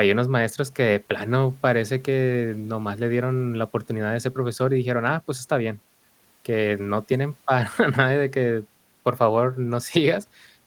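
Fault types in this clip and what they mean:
No technical faults can be heard anywhere in the speech.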